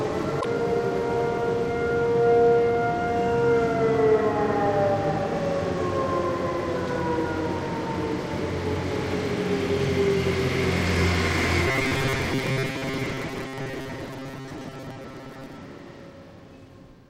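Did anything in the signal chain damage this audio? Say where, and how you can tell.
Yes. At the codec or storage stage, from 0.37 to 0.45 s, there is a short glitch in the sound. This points to damaged data in a compressed stream: the decoder hits corrupt frames, loses sync and recovers at the next valid header. Unlike a buffer fault, it is one isolated glitch with no periodic pattern.

From 11.68 to 15.58 s, the sound takes on a rigid, metallic buzz at 133 Hz that tracks the original only loosely. The likely cause is robotic sound from repeated short buffers at the driver or buffer stage: audio arrived late, so segments of about 7.5 ms were replayed in its place, making up about half of that stretch. A steady fixed-rate buzz lasting nearly four seconds separates it from the single codec glitch.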